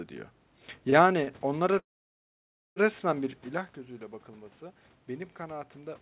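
At 0.90 s and again at 1.24 s there is a short stall from a late packet. The jitter buffer ran dry and the receiver held the last sound for about 22 ms, a brief drawn-out buzz, before resuming exactly where it left off. Unlike a dropout, nothing is skipped.

From 1.78 s to 2.78 s comes a call audio freeze. The last sound trails off into roughly 930 ms of silence, and the audio then picks up with nothing missing. The pause has been inserted, likely because packets were held up in transit. Its length and silent tail set it apart from the brief stalls before it.

The level change near 3.5 s is the talker shifting position, not a fault. From 4.26 s to the end there is automatic gain rising. After the input fell by about 12 dB, the gain climbs gradually, so the voice and the room noise swell together. That shared rise in the background is what distinguishes it from a talker moving closer. Throughout, the G.711 call path leaves nothing above 4 kHz.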